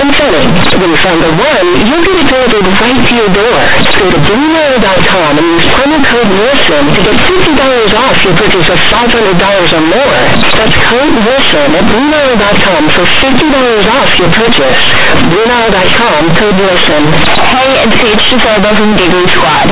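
From start to finish the speech comes through as harsh, buzzing distortion, pushed almost to full loudness, with quiet syllables blown up to the size of loud ones and heavy noise filling the pauses. This is companded audio read as linear: the mu-law bytes from the telephone path are played as plain 8-bit samples without expansion, so every sign change throws the waveform across half its range. The underlying G.711 coding still limits the band to below 4 kHz.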